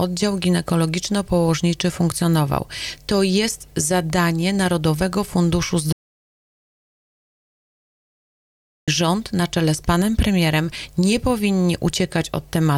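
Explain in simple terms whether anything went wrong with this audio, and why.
The audio input was likely cut off for a moment, through a loose connection, a failed link or an accidental mute, while the recorder kept running and saving pure silence. That is an audio dropout to silence. At 5.93 seconds the sound stops abruptly, and it returns just as suddenly at 8.88 seconds. For nearly three seconds there is total silence, with no background hiss or room sound at all, and whatever happened in that gap is lost for good.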